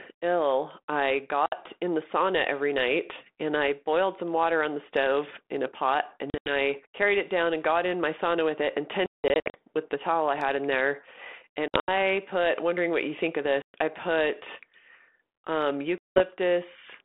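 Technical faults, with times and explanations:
1.46–1.53, 6.30–6.53, 9.06–9.55, 11.68–11.91, 13.62–13.75 and 15.98–16.21 s, packet loss on an ADPCM call: hard-edged silent gaps of up to 180 ms. Afterwards the speech returns slightly distorted, because the decoder's adaptive predictor and step size have fallen out of step with the sender's. It takes some tens of milliseconds to pull back into line.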